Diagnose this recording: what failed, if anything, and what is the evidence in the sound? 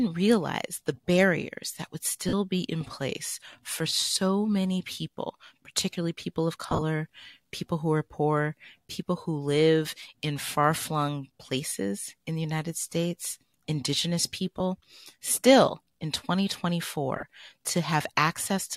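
Brief noisy smears replace the sound at 2.29, 6.68–6.82, 11.69–11.72, 14.58–14.60 and 17.16–17.23 s. These are lost LE Audio frames on the Bluetooth link, concealed by the LC3 decoder's sign-randomised spectral repeats.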